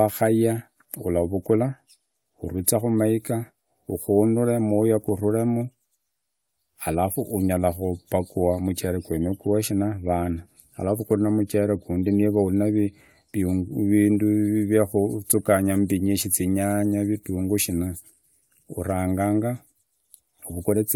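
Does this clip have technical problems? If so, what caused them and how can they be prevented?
No technical faults are audible.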